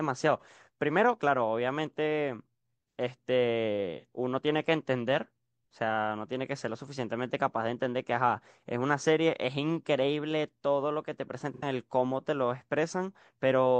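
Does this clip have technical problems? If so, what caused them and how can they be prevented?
Yes. The speech has AAC frame loss with concealment at 0.39–0.44 s, 3.98–4.05 s and 11.54–11.63 s. The first two gaps are about 43 ms each, consistent with a single lost frame. The third is about 85 ms, consistent with two. In each gap the decoder rebuilds the missing audio from the last good spectrum, which produces a brief smeared, noisy patch instead of a clean continuation. Prevention: use a transport with error protection or retransmission so that frames reach the decoder intact.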